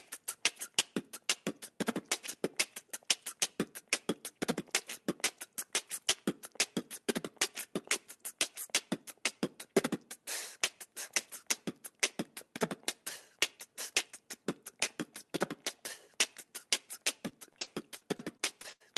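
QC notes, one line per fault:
17.29–18.82 s, repeated packet loss (robotic sound): a rapid run of dropouts, longest 82 ms, each patched by extending the preceding sound, leaving choppy sound with pieces missing.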